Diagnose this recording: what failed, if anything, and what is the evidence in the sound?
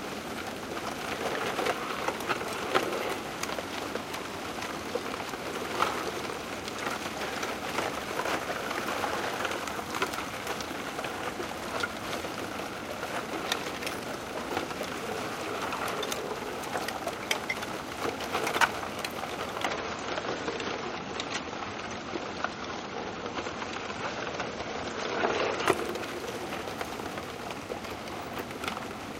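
From 19.66 s to 25.66 s the top end abruptly collapses: nothing remains above about 8.3 kHz, and the sound turns dull and swirly before full brightness snaps back, with no gap at either switch. This is an adaptive stream at a lower bitrate, a network-stage fault. When throughput fell, the player swapped to a leaner rendition for six seconds. The encoder discarded the treble to fit the budget, which fits a drop from about 128 kbit/s MP3 to about 32 kbit/s.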